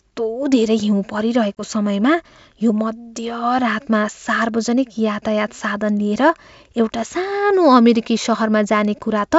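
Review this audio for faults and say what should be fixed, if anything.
Packet loss on an ADPCM call leaves a hard-edged silent hole from 1.56 to 1.62 s, about two packets' worth of audio. Unlike a plain dropout, the sound resumes unsettled while the G.722 decoder's predictor and step size realign. Adding packet loss concealment, or stronger jitter buffering and redundancy on the network path, would prevent it.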